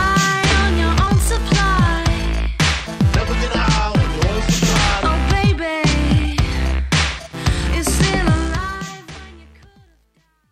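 From 8.29 s the fade-out suffers truncation distortion, grittier toward the end, worst from 9.51 s to 10.51 s. It sounds like roughly an 11-bit stage without dither.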